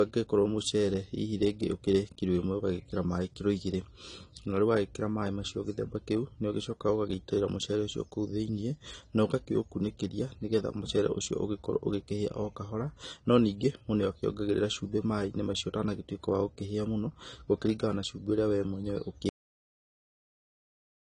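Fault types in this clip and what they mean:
Low-bitrate audio saved at a high bitrate: The MP3 holds nothing above about 10.1 kHz, and coarse coding smear remains, likely from an earlier low-bitrate encode such as 32 kbit/s AAC, unlike a clean deliberate low-pass.
Cut-off end: The speech stops abruptly mid-sound at 19.29 s and falls straight to digital silence with no decay, unlike a fade-out or a natural pause.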